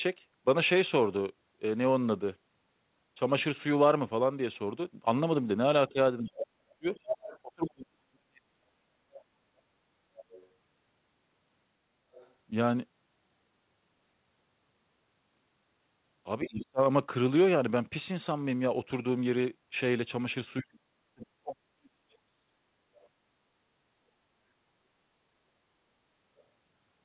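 From 5.89 to 8.91 s, the echo canceller likely clamped down during double talk, so the speech was suppressed: it drops by up to about 40 dB and goes missing in pieces for around 2 s in total. Inside that stretch, from 6.95 to 7.39 s, the other side's voice leaks through, likely because the canceller left loudspeaker echo in the microphone signal. It is only about 5 dB below the speech. The other side's voice leaks through again from 9.14 to 10.48 s at about 25 dB down, likely residual echo, heard as a faint second voice. From 12.13 to 12.31 s a brief scrap sits at about 30 dB down. Speech is suppressed in double talk again from 16.43 to 16.81 s, likely the same canceller overreaction, with a dip of about 35 dB lasting roughly 0.4 s. From 20.61 to 22.47 s a longer suppression follows, deepest at about 40 dB and patchy across about 2 s. Last come tiny leaked fragments of the other side's voice, likely residual echo, at 23.03 to 23.07 s and 26.37 to 26.42 s, about 35 and 40 dB below the speech. 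Throughout, the call path's G.711 A-law codec caps the audio at 4 kHz.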